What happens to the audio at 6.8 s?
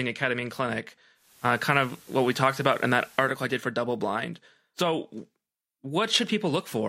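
Nothing goes wrong at 6.8 s; the speech is intact there, with no dropout, click or distortion.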